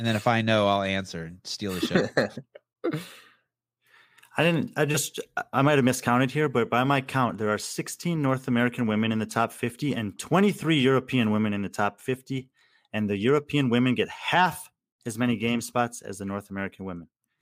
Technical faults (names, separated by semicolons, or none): none